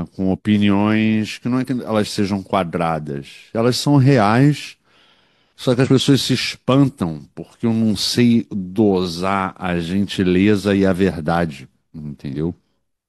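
At 1.63 to 1.68 s, again at 5.81 to 5.87 s, and once more at 12.31 to 12.35 s, the speech hits damaged data in the compressed stream. Each time, a short stretch of the encoded file is corrupt, so the decoder misreads those frames, loses its place, and hunts for the next valid frame header before carrying on. You hear it as a brief glitch, around 40 to 65 ms, cutting across the speech.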